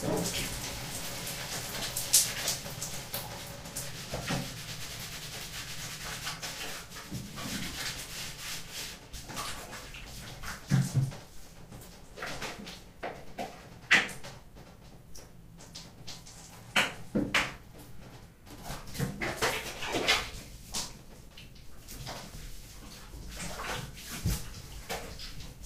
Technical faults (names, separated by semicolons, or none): lost LE Audio frames